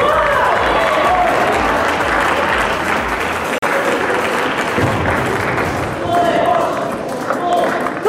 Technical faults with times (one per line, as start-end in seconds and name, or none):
3.58-3.62 gap between stream segments